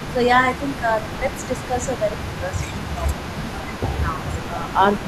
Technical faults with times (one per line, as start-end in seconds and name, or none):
0.00-0.14 echo leak
0.13-0.18 speech suppressed in double talk
0.60-5.07 echo leak
0.80-2.54 speech suppressed in double talk
4.03-4.82 speech suppressed in double talk